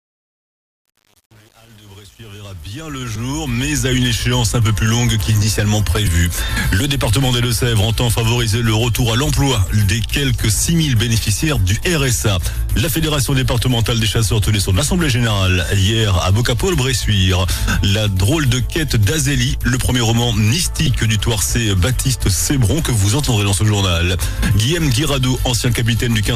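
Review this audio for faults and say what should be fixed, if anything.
The fade-in from 0 to 3.86 s has truncation distortion. The gain stage keeps only about 7 bits without dither, so the quiet start breaks into coarse square steps and sounds gritty, worst from 0 to 3.48 s. Unlike noise or hiss, the grit rises and falls with the fade level and stops once the level is full. To prevent it, apply the fade at high resolution and add dither before reducing word length.

A corrupt frame is decoded at 3.14 to 3.19 s, 6.05 to 6.09 s, 11.35 to 11.39 s, 20.86 to 20.89 s and 25.68 s. Each is a brief chirp or noise burst, quite loud at 6.05 and 20.86 s, where damaged data placed energy at wrong frequencies. Unlike a plain click or dropout, it lasts two or three frames. To prevent it, protect the stream with checksums so the decoder conceals bad frames rather than playing them.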